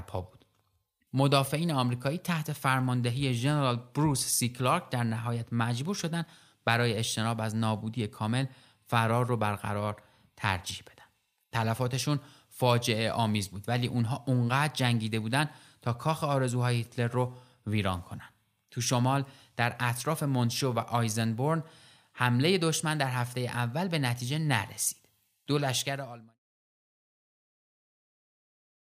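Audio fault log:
No technical faults are present in this speech recording, and the level eases down in a smooth fade-out from roughly 25.5 s to 26.4 s with no click or hard edge.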